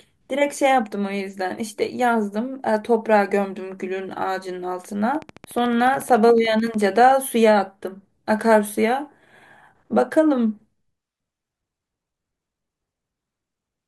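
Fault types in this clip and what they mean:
Train of clicks: something in the chain, likely electrical interference from nearby equipment or a faulty connection or power supply, injects a short pulse over and over at a steady rate. From 5.15 to 7.12 s the speech carries a regular ticking at 13.8 clicks per second, around thirty near-identical pops in all. They reach roughly the level of the speech itself and sit on top of it, audible in the gaps as well.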